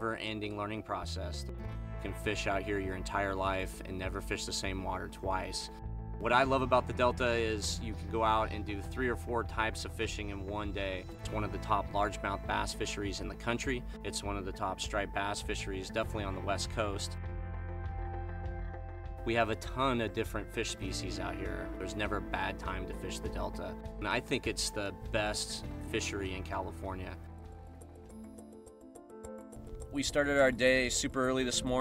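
No technical faults can be heard anywhere in this audio.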